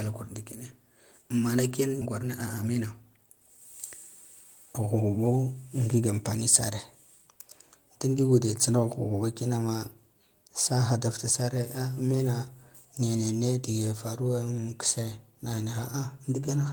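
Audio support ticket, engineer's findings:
Skip ahead, 2.01–2.03 s. Jitter buffer or network discarded about a second of queued audio while later packets were already waiting; playback delay dropped by a similar amount. Audible as an abrupt forward jump with no fill: the sides of the cut butt together almost directly.

Jitter buffer speed-up, 2.05–3.47 s. Buffer still over target after the jump; receiver repeatedly cut short pitch-period slices, roughly 0.3 s in total. Playback at 119% speed, pitch unchanged, so the speech sounds rushed.

Jitter buffer speed-up, 4.79–6.37 s. Same time-compression mechanism, milder: about 0.15 s removed, 110% speed. Delivery noticeably hurried, pitch steady.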